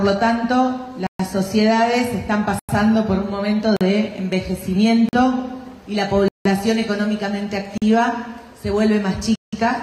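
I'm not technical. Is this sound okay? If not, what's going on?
No. The sound drops out completely seven times, at 1.07, 2.59, 3.77, 5.09, 6.28, 7.78 and 9.36 seconds. Each is a block of digital silence: a short stretch where the audio is replaced by nothing at all, lasting between about 0.04 and 0.17 seconds. Because it cuts off and back on instantly, each one lands as a click or a brief hole. The regular lengths suggest the playback program isn't delivering audio fast enough to keep up.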